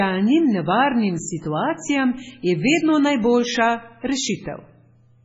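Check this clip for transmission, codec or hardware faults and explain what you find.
One codec fault runs through the whole recording. From start to finish, the speech carries the signature of MP3 compression, likely from an encoder starved of bits at a rate near 16 kbps. It discarded everything above 7.7 kHz and switched weak frequency lines on and off between frames. The result is heavy, watery, swirling artefacts, metallic s sounds and smeared attacks.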